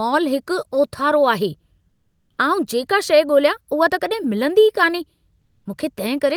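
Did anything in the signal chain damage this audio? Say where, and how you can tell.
Yes, codec stage: comfort noise in place of the background at 1.89–2.37 s and 5.41–5.65 s, featureless and about 4 and 2 dB quieter, likely Opus DTX.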